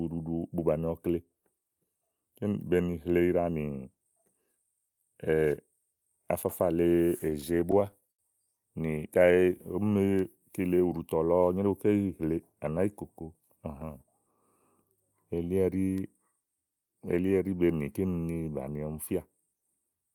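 From 6.89 to 8.21 s, repeated stalls (stutter): late packets drained the jitter buffer twelve times. The receiver extended the last sound across 193 ms, with the longest gap at 72 ms, so the speech drags and stutters. On a spectrogram, short frozen, smeared patches interrupt the harmonics.

Just before "ùɖùtɔ̀ lɔ", from 8.98 to 10.62 s, a jitter buffer slow-down repeats pitch periods, adding 160 ms. The speech runs at 91% speed at an unchanged pitch. The waveform shows drawn-out, repetitive cycles.

After "nyeréwu ké yì hle", from 12.53 to 14.27 s, a jitter buffer speed-up drops about 150 ms of pitch periods to shrink excess delay. The speech runs at 108% speed and sounds hurried, with compressed, tighter-packed cycles in the waveform.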